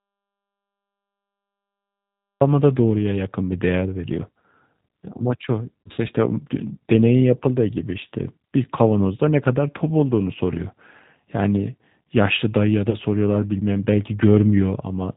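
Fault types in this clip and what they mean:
G.729 codec: Throughout the speech the sound is band-limited, with nothing above 4 kHz, and has the slightly rough, synthetic texture of a low-rate CELP coder. That points to G.729A at around 8 kbit/s, rebuilding each frame from a filter, a pitch predictor and a few pulses. The damage is plainly audible but steady across the clip. That steadiness separates it from packet loss, which strikes only at moments.
Audio dropout to silence: The clip opens in silence that lasts until about 2.41 s, when the speech comes in abruptly. The gap has no room tone and no codec hiss, which likely means the input was lost and silence was written until it returned. Packet loss concealment fills a gap with buzzy, fading sound, but this gap is completely empty.
VoIP packet loss concealed by the speech codec: At 5.82 to 6.00 s about 120 ms of speech is missing, scattered over 160 ms, with the longest run about 60 ms. 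At 12.89 to 12.96 s about 40 ms is missing. Instead of silence, the decoder stretches its last pitch and filter into a buzzy tone or coloured noise that fades, and the speech stays weak briefly afterwards. A dropout would leave true silence at these points.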